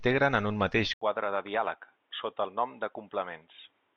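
At 0.93 s, right after "en un mateix", the audio drops out for about 80 ms and returns duller and boxier for the rest of the clip. Nothing reaches above 3.8 kHz, the level falls by a few decibels, and a faint new background noise appears. The likely cause is the input switched to a poorer device. A plain filter or codec bandwidth drop would not bring this gap, level shift and different noise floor.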